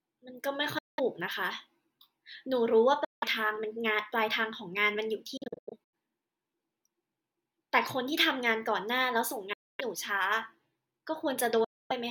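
Speech that cuts to silence at 0.78 to 1.00 s, 3.04 to 3.24 s, 9.53 to 9.81 s and 11.64 to 11.92 s, and in scattered short gaps between 5.37 and 5.93 s. Each time it resumes further on, as though it had kept playing. This is a likely Bluetooth dropout, with packets failing to reach the headphones in time.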